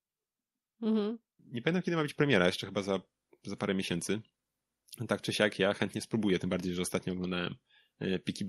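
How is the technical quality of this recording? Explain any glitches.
Listening to the speech recording, nothing stood out as a technical problem.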